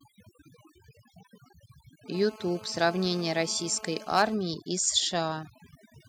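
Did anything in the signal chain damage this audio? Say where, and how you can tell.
Yes. Overdone noise removal runs throughout the processing stage. It pushes individual frequency bands down or off whenever they sit near its noise estimate, taking quiet parts of the speech with them. The background drops and breaks up into twinkling specks.

GSM phone buzz enters the analogue wiring from 2.14 to 4.35 s. A nearby 2G phone on a call transmits in bursts about 217 times a second, and the circuit rectifies them. The result is a steady, raspy 217 Hz buzz with many harmonics, about 19 dB below the speech.

Microphone overload appears at the converter from 4.16 to 4.22 s. Peaks run about 3 dB past full scale, and around 2 percent of samples are flattened at the limit. That adds a harsh, crackling edge to the loudest syllable, likely because the input gain was set too high.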